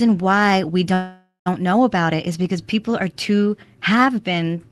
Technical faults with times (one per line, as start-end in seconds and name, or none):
0.93-1.48 call audio freeze